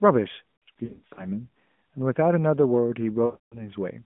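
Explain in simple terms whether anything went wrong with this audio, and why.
Around 0.65 to 1.28 s and 3.26 to 3.70 s, the speech stutters, smears and fades out briefly. These are lost AMR speech frames: radio errors corrupted chunks, and the phone's decoder guessed at the gaps.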